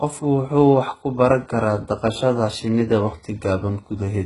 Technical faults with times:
0.00-4.25 HE-AAC compression

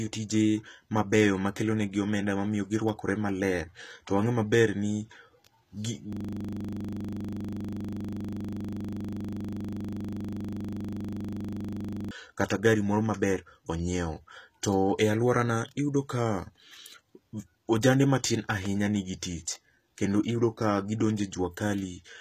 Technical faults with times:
0.00-22.20 HE-AAC compression
6.13-12.11 system hang loop

